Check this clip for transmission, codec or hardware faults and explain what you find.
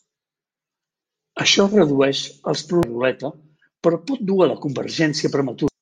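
Two brief faults of one kind appear in this speech clip.

At 2.83 s and 5.68 s there is damaged data in a compressed stream. Corrupted bytes make the decoder misread a frame and lose sync, producing a very short blip.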